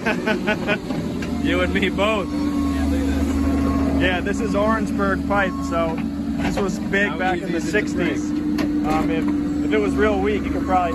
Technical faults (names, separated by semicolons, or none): none